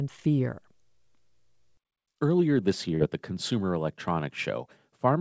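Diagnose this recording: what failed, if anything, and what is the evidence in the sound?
Short concealed packet loss at 2.96 to 3.02 s, at the network stage of the call. About 40 ms of speech reached the decoder too late, so the receiver stretched the preceding sound across the gap, heard as a brief smear before the real audio resumes.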